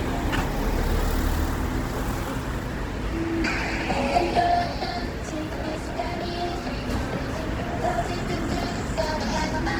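From start to finish, the sound carries Opus compression damage that is plainly audible. Tones turn noisy, rough and grainy rather than swirling. That fits Opus in its music (CELT) mode, which keeps each band's energy but fills starved bands with folded copies or noise. The bandwidth stays wide, with content up to about 20.1 kHz. The graininess points to a low rate near 16 kbps. The cause is likely lossy encoding of this kind.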